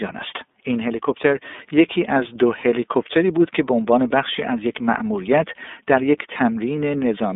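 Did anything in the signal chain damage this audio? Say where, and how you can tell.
Yes. Throughout the speech there is a thin telephone band from about 250 Hz to 3.6 kHz with a rough, slightly synthetic grain. That points to the iLBC codec at the codec stage, coding each 30 ms frame independently, which fits its 13.33 kbps mode.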